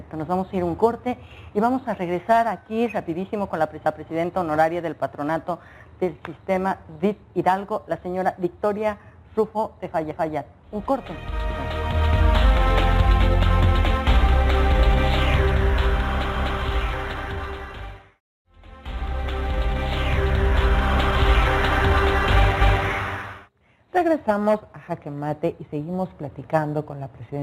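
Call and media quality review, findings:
Overlapping chunks: 250 ms of sound replayed, heard as a stutter at 3.86, 10.11, 16.36 and 22.61 s. Regular 6.25 s spacing. Probable chunked processing or transport stage: each 6.0 s chunk starts 250 ms before the previous ends, duplicating the overlap.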